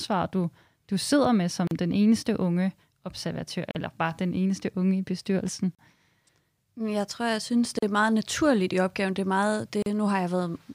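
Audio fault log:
1.67–1.71, 3.71–3.75, 5.75–5.79, 7.79–7.82 and 9.82–9.86 s: gap at a join of encoded pieces. The speech was encoded in 2.0 s segments and spliced untrimmed, so each encoder's start-up delay and final-frame padding remain as about 38 ms of silence at every seam, for example between "jeg tror jeg synes" and "er meget naturligt i". The speech drops out with smeared edges, then resumes where it stopped.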